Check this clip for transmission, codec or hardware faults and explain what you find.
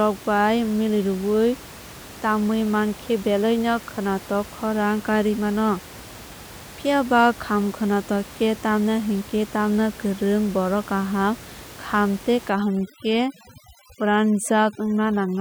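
One processing fault appears near the end. The room noise, about 19 dB below the speech, is part of the recording itself.

Overdone noise removal runs from 12.50 s to the end, after "borok kaham kham tei". A too-strong noise reducer cuts bands near its noise estimate, leaving twinkling near-silence.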